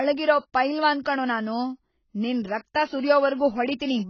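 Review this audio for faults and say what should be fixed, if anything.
The speech was likely encoded with AAC compression at a very low bitrate, consistent with AAC-LC at about 16 kbps, throughout the clip. Starved of bits, the coder removes everything above 6.8 kHz and quantises the remainder coarsely, leaving the sound dull, smeared and warbly. Encode at a substantially higher bitrate, or deliver from an uncompressed master, to prevent this.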